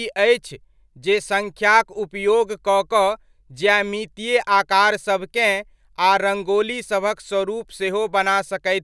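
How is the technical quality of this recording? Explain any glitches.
No glitches turn up anywhere in this speech recording. Its technical quality holds steady throughout, with nothing in it that calls for explanation.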